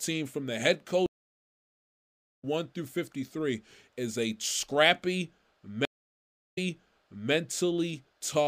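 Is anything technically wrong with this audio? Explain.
Yes, there are two stream reconnects. After "from the head", at 1.06 s, the speech drops out for 1.37 s and resumes at 2.45 s about one and a half seconds further on, skipping material. After "is a scrappy", at 5.85 s, a 0.72 s silence ends with the speech jumping back 0.76 s and repeating, with the disturbance over by 7.32 s. Both times, the connection broke and the player restarted decoding mid-stream. The first gap skips ahead like a live feed, and the second repeats audio because the server resent buffered audio.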